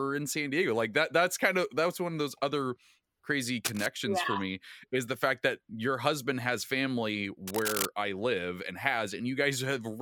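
Speech interrupted by brief scratchy, rustling bursts at 3.65–3.86 s and 7.47–7.86 s, nearly as loud as the voice: cable scratch noise, likely from a worn cable or connector being moved.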